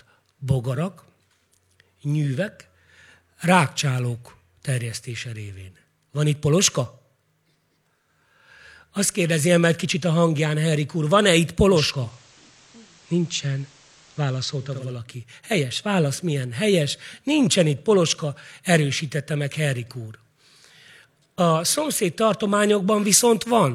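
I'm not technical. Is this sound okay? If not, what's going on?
No. From 11.67 to 15.03 s the speech shows digital radio blending to analogue. Over about half a second the radio fades to the station's FM broadcast, which sounds slightly different in loudness and faintly hissy, then fades back. Unlike a dropout, the speech never stops.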